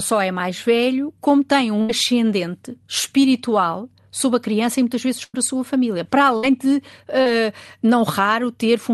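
Speech carried over a call link, whose coding noise and top end near 12 kHz fit Opus at roughly 40 kbps, with three bursts of packet loss. At 1.81 to 1.90 s, right after "mais velho como tem", about 74 ms is filled. At 5.24 to 5.35 s, between "criança e muitas vezes" and "a sua família", about 100 ms is filled. At 6.37 to 6.44 s, about 60 ms is filled. In each burst the receiver stretched the last sound into a fading buzz or hiss before resuming past the lost stretch. On a spectrogram each shows as a smeared continuation of the last sound that dims toward the gap's end, and in the waveform as a decaying, oddly regular envelope. A short concealed packet loss at 7.22 to 7.27 s fills about 38 ms with continued pitch or shaped noise, heard as a brief wobble or smear. It appears as a brief smeared continuation of the last sound in the spectrogram and a short, blended patch in the waveform.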